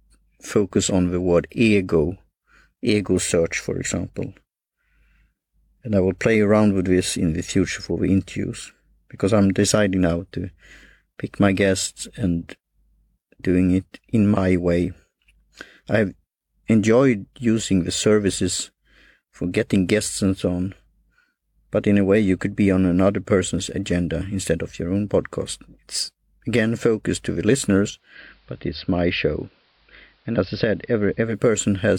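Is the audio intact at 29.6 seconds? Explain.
No. From 27.88 to 31.48 s a digital radio blends to analogue: after a 292 ms cross-fade the station's AM broadcast takes over, cutting the treble, dropping the level about 1 dB and adding hiss roughly 40 dB down. The rising hiss and the blend back at 31.48 s set it apart from plain low-pass filtering.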